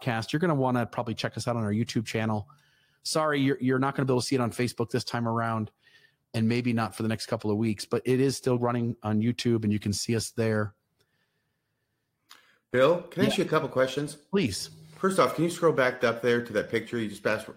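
No technical faults are audible anywhere in the recording.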